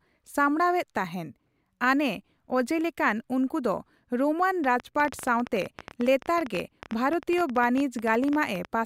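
From 4.64 s to 8.66 s the speech carries a train of clicks, roughly fifty short pulses at about 12.5 per second, spaced unevenly rather than on a fixed beat. Each click has much the same sharp shape and peaks around 5 dB above the speech, so they stand out as a ticking, popping layer over the talking and through the gaps between phrases. The likely cause is interference from nearby equipment or a faulty connection or power supply.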